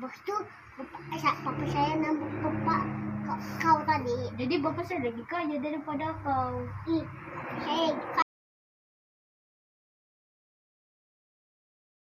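Audio dropout to silence at 8.22 s: the sound cuts off mid-flow and the rest of the clip is silence, with no room tone. The input was likely lost through a disconnected device, failed link or mute while the recorder kept writing silence.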